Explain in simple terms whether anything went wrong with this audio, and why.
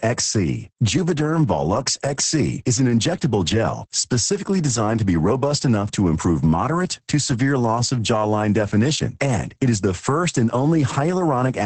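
Yes, something went wrong, and it lasts the whole recording. The speech has been squeezed hard by Opus voice compression. To save space, the coder keeps only a rough model of how the voice is shaped. It rebuilds the buzz underneath it only coarsely. Everything above about 8.6 kHz is simply gone. So the voice sounds muffled and dull from start to finish. It also sounds hoarse and a little robotic, because so much detail was thrown away.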